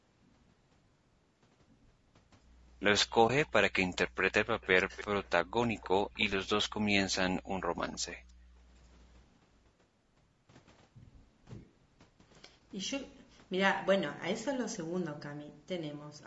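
Throughout the speech there is a rough, grainy quality with noise filling the gaps between harmonics, a clear sign of low-delay AAC compression, likely AAC-ELD at a bitrate around 32 kbps. On a spectrogram the harmonic lines look smeared and speckled, and the band stops at 8 kHz.

From 3.27 to 3.30 s there is a brief dip, heard as AAC frame loss with muting. The decoder zeroed the missing spectrum, which fits a single lost frame. The waveform tapers smoothly to silence and back, and the spectrogram shows a brief blank vertical strip.

An echo leak appears from 3.45 to 3.49 s, 4.08 to 5.27 s, 5.64 to 6.49 s and 7.92 to 8.32 s. A delayed copy of the speech sits behind the original, 320 ms late in the first two stretches and 295 ms late in the last two. It is very faint at 3.45 s and 7.92 s and more noticeable in the other two stretches, likely from a loudspeaker echo the far-end canceller missed. 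On a spectrogram it looks like a fainter, offset ghost of the harmonic pattern.

Speech suppressed in double talk occurs from 4.83 to 5.06 s and from 7.62 to 7.73 s, about 150 ms and 100 ms of dips. The speech drops by up to about 35 dB and then about 40 dB, likely because the canceller ducked everything while it could not separate the talker from the echo. The waveform shows chopped gaps in the envelope.

From 8.17 to 8.61 s the background is gated by the echo canceller. The room sound falls away by up to about 37 dB for roughly 400 ms, then returns. The spectrogram's noise floor goes dark across all frequencies before it recovers.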